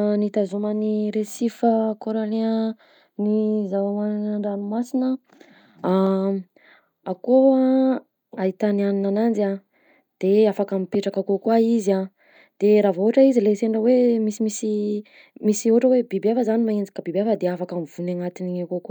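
No technical faults can be heard anywhere in the speech, so there are none to describe in time order.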